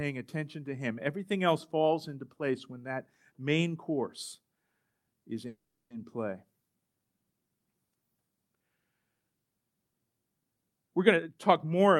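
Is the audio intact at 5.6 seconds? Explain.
No. A call audio freeze runs from 5.47 to 5.92 s: the last sound continues as a brief fading buzz or hiss, then about 0.33 s of silence, before the audio resumes where it stopped. Nothing is lost; the 0.43 s gap likely comes from delayed packets emptying the jitter buffer.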